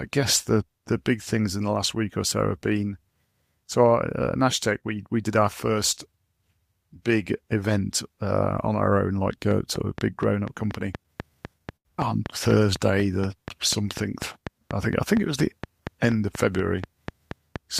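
From 9.51 s to the end, a train of clicks ticks over the sound at a steady 4.15 per second, continuing through pauses as well, with peaks standing roughly 10 dB above the signal. The regular spacing and near-identical shape point to a likely cause in interference from nearby equipment or a faulty connection or power supply injecting pulses. On a waveform the clicks appear as evenly spaced spikes. On a spectrogram they form thin vertical lines running across the full frequency range.

At 11.77 s, within that stretch, a short stall from a late packet holds the sound for 85 ms, until 11.88 s. The jitter buffer ran dry because the packet arrived late, so the receiver stretched the last sound and then resumed from the same point. Nothing is lost, but the delay grows by 85 ms. A spectrogram shows frozen horizontal bands over that span. The waveform shows a short, repetitive, oddly uniform section.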